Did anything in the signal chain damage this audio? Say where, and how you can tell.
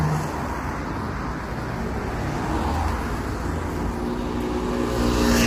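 Yes. The damage is at the codec stage, and it runs through the whole clip. The sound is rough and grainy throughout. A noisy haze fills the gaps between tonal components, and the top band sounds dulled and partly synthetic. This is heavy, and it points to likely low-delay AAC compression, AAC-ELD, at a low rate around 24 kbps. Its short frames resolve fine frequency detail poorly. At this rate, bits run out and noise fills what the coder cannot describe.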